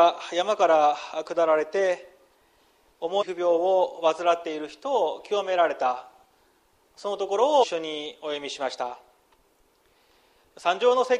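Two brief glitches break up the audio, one from 3.21 to 3.23 s and another from 7.62 to 7.64 s, each lasting only about 24 ms and heard as a short chirp, squawk, click or hole. That's damaged data in a compressed stream: a stretch of the encoded bytes got corrupted, so the decoder couldn't read those frames properly, lost its place, and had to hunt for the next valid frame header before picking up the sound again.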